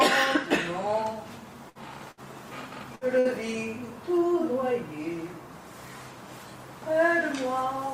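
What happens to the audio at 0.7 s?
Nothing goes wrong at 0.7 s, and the audio plays through that moment intact.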